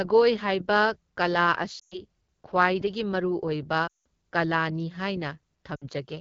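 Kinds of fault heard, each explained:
AMR wideband (HD Voice) codec: The speech carries the sound of AMR-WB running at about 8.85 kbit/s, one of its two lowest rates. The band up to 6.4 kHz is rebuilt from a pulse-excited vocal tract model, and the 6.4 to 7 kHz region is filled with shaped noise rather than real detail. At this rate the damage is plainly audible throughout: the voice sounds rough and raspy.
Lost AMR speech frames: Three gaps appear where corrupted frames were discarded and the decoder filled in by repeating its last good pitch and vocal tract settings at decaying gain. They occur at 1.79 to 2.05 s, 3.87 to 4.06 s and 5.75 to 5.84 s. The lost stretches last 120, 180 and 60 ms. Each is heard as the sound dropping to near silence within two frames, and the voice returns briefly weak or rough afterward.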